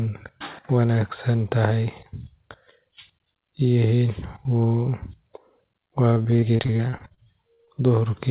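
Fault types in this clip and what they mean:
Repeated packet loss (robotic sound): From 6.14 to 7.69 s the speech breaks into close to twenty short holes, the longest about 52 ms. Each hole is filled by extending the sound before it. About a quarter of that stretch is patched, so it turns choppy and robotic.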